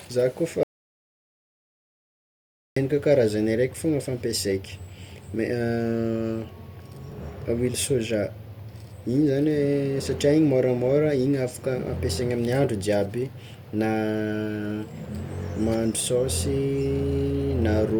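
The input feed was likely lost briefly, with the recorder writing silence in its place, an audio dropout to silence. From 0.63 s to 2.76 s the speech cuts off mid-flow into total silence, no room tone, and about 2.1 s of speech is missing.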